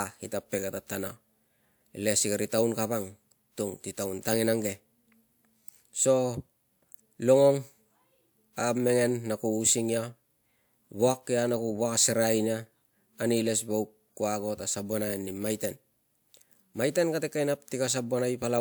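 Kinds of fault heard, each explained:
Nothing stood out on listening to this recording.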